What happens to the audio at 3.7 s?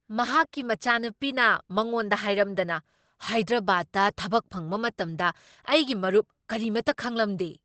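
At 3.7 s the speech carries the same Opus compression damage heard throughout the clip, likely from a low-rate encode in Opus's SILK speech mode that fits about 16 kbps. Nothing remains above 8.4 kHz, so the wideband sound is muffled and hoarse.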